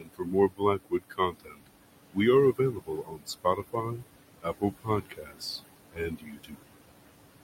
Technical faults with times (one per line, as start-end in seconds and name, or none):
0.00-7.43 noise suppressor artifacts
0.00-1.68 speech cut by the noise suppressor
2.53-4.04 speech cut by the noise suppressor
4.41-5.42 speech cut by the noise suppressor
5.91-6.66 speech cut by the noise suppressor